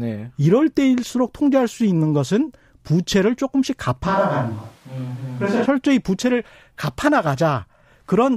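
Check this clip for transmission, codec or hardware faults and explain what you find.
One fault, a switch to a distant microphone, from 4.07 to 5.65 s. The close microphone's feed likely dropped out, leaving a far pickup. The speech turns suddenly roomy and hollow, thinner in the bass, with little level change and room noise around 30 dB below it, then snaps back.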